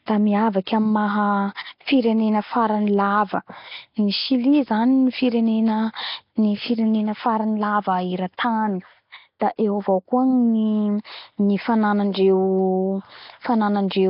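Throughout the speech a rough, hissy halo clings to every syllable, with a smeared, underwater colour and nothing above 5.3 kHz. That combination points to heavy Nellymoser compression, likely the Flash-era Nellymoser Asao codec at a bitrate around 22 kbps. Starved of bits, it leaves weak bands empty and fills them with noise. Unlike a simple low-pass filter, which would only dull the top end, this codec also adds a grainy noise fill inside the remaining band.

At 8.37 s and again at 9.40 s, a brief wisp of hiss arrives just ahead of a sharp onset, lasting about 12 ms and 18 ms respectively. This is pre-echo. The codec spreads its quantisation noise across the whole transform block, so noise sized for the loud attack also fills the quiet instant before it, softening that attack. Echo or ringing would trail after the sound, whereas this hiss comes before the onset.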